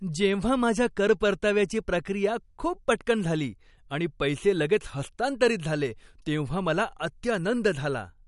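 Speech carrying plainly audible damage throughout, likely from MP3 compression at a low bitrate around 48 kbps: nothing survives above 11.2 kHz, and weak frequency lines flicker between frames, giving a watery swirl and smeared attacks that a simple low-pass filter would not produce.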